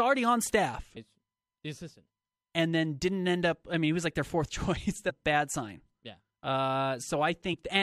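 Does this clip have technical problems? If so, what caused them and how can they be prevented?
Yes. Damaged data in a compressed stream causes blips at 0.95 s, after "on staff", and at 5.09 to 5.11 s. Corrupt bytes make the decoder lose sync. Verified, checksummed transfers and storage prevent this.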